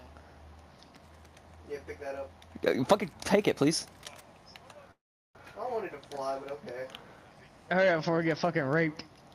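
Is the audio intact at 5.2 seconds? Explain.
No, a call audio freeze runs from 4.91 to 5.37 s: likely delayed packets emptied the jitter buffer, so a brief fading buzz gives way to about 0.38 s of silence, then the sound resumes 0.44 s late with nothing lost.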